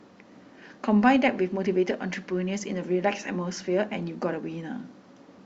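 No technical faults are audible.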